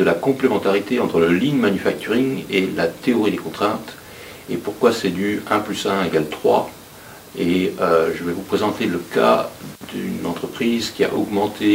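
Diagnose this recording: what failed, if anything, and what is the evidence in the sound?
Listening through the recording, nothing stood out as a fault at any stage of the chain.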